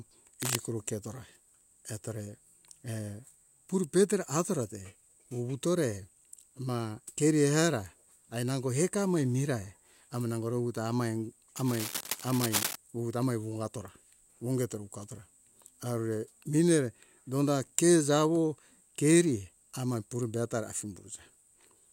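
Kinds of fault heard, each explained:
Cable scratch noise: Dense, irregular bursts of scratching noise sit over the speech from 0.42 to 0.57 s and again from 11.56 to 12.76 s, only a few dB below it, likely from a worn cable or connector shifting and its contact resistance fluctuating.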